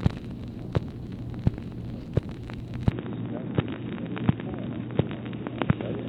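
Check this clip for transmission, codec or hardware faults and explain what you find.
There's one fault: an input switched to a poorer device at 2.91 s, lasting to the end. Everything above 3.8 kHz vanishes, with no gap and no real level jump, plus a new noise floor roughly 35 dB down, most likely a narrower-band microphone or headset profile taking over.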